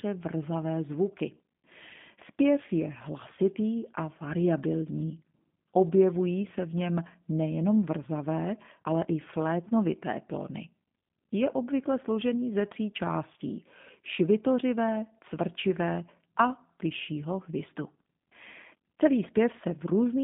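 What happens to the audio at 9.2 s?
At 9.2 s the G.729 codec damage is present, as it is throughout the clip. The speech is resynthesised from a vocal-tract filter, pitch predictor and sparse pulses, which fits an 8 kbit/s stream. This gives plainly audible roughness and a line band of 150 Hz to 3.6 kHz, with nothing above 3.7 kHz.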